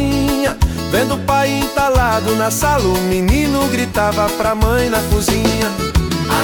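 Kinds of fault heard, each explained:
GSM phone buzz: a nearby 2G handset's radio bursts, repeating at about 217 Hz, are rectified by the audio circuitry into a hard, raspy, harmonic-rich buzz; here it sits steady from 3.79 to 5.32 s, as during a call, about 29 dB below the signal.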